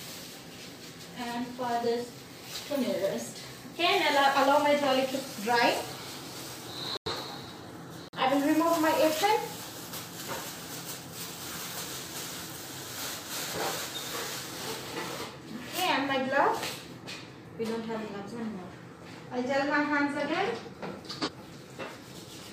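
Abrupt silent gaps at 6.97–7.12 s and 8.08–8.18 s are corrupt frames muted: the decoder rejected damaged compressed frames and the player substituted silence. At 21.17–21.29 s, a corrupt frame decoded produces a burst of misplaced spectral energy peaking at about −15 dBFS across a couple of frames.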